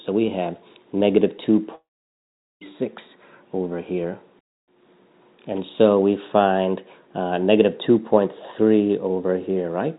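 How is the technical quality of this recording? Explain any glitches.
There is one clear glitch. The audio has nothing above 4 kHz, which fits a narrowband call codec such as G.711 mu-law.

From 1.75 to 2.63 s there is a long network dropout, the likely cause. The receiver stretches the last sound into a brief fading buzz or hiss. About 0.78 s of silence follows. The audio resumes at 2.63 s. Roughly 0.86 s of the original sound is missing.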